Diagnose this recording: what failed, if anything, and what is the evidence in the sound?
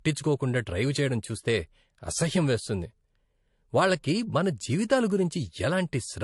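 Transcoding between lossy codecs, throughout the speech at the codec stage: nothing above 11.3 kHz, and two layers of codec artefacts heard together, likely MP3 re-encoded to low-bitrate AAC.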